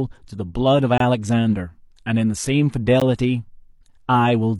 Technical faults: gap between stream segments

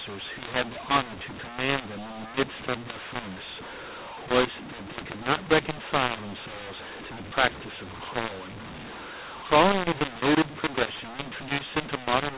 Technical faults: mu-law and A-law mixed up

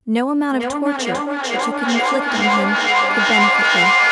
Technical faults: feedback echo between two devices

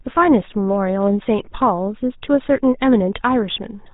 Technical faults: GSM full-rate codec

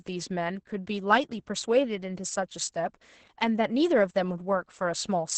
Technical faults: Opus voice compression

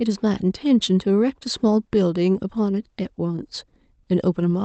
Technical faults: none

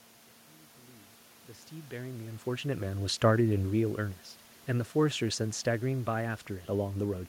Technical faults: none

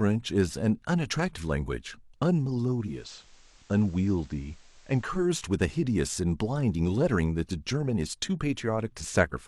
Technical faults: digital radio blending to analogue

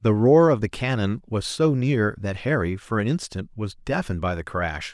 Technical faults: none

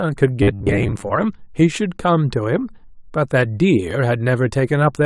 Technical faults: robotic sound from repeated short buffers

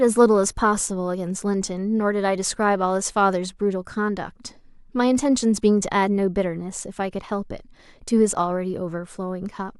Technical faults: none

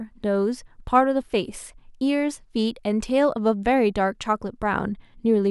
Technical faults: none

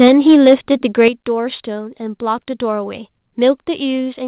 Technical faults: microphone overload; microphone volume stepped down

